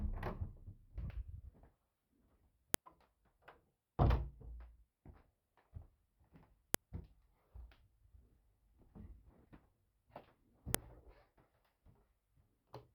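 At 2.74 s you get a sharp, loud click, and it comes back at 6.74 s and again at 10.75 s, exactly 4 s apart each time. That's a file header played as audio: separate WAV pieces, each about 4 s long, were stuck together without stripping their headers, so those few dozen header bytes get read as samples. The result is a hard snap at every join, no matter what the everyday sound around it is doing.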